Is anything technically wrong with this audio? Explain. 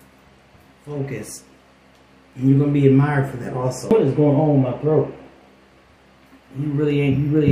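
Yes. There is a CD skip at 3.90 s. A knock or a surface flaw threw the laser onto a different turn of the disc's spiral, so the player muted for around 5 ms and resumed playback from another point, either ahead or behind. It sounds like a tick followed by an abrupt jump in the sound's continuity. On a waveform it shows as a tiny gap with an abrupt change in the signal either side. On a spectrogram it appears as a thin vertical break where the content on each side does not line up.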